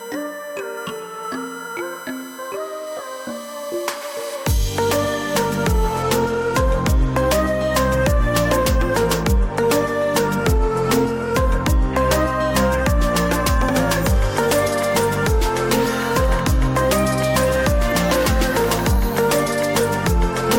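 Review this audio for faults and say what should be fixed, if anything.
USB whine, 0.0 to 6.02 s: a steady tone at 1 kHz, strongest at 8 kHz, roughly 25 dB below the sound. The bus draws current in 1 ms frames and 125-microsecond microframes, which leaks in through power or ground. A USB isolator or separately powered interface would prevent it.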